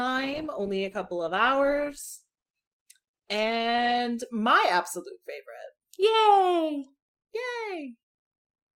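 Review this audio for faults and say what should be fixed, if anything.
Adaptive stream starting at a low bitrate, 0 to 4.0 s: treble is missing and codec artefacts are strong, fitting 16 kbit/s Opus, until quality jumps without a gap to what fits 64 kbit/s. To prevent it, start playback on a higher-bitrate rendition or measure bandwidth before the first segment is chosen.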